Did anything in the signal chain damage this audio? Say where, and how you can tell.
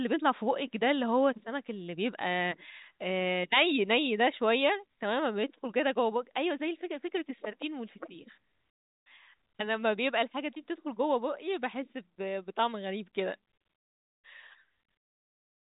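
No, no damage in this audio.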